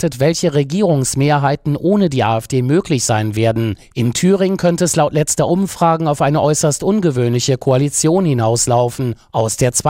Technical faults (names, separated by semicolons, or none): none